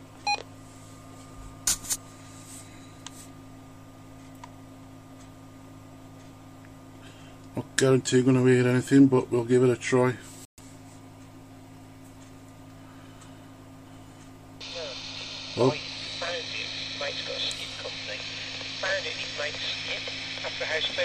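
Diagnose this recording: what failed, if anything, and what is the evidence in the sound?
Bluetooth stall at 10.45–10.60 s: a 128 ms drop to silence, likely the headphone buffer running dry while interference delayed packets on the wireless link.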